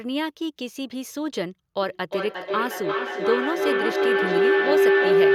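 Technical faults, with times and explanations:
1.82 to 5.35 s, feedback howl: A tone near 400 Hz swells and runs to the end, peaking about 8 dB above the speech. The loop repeats roughly every 0.4 s. A microphone-to-loudspeaker loop gains level each trip, so repeats grow instead of fading.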